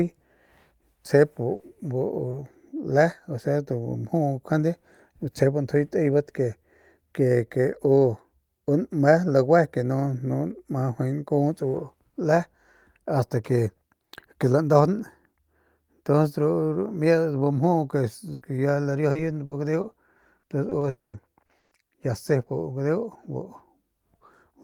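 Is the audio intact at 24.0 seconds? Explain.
Yes, the audio is intact at 24.0 seconds, with no fault at that moment.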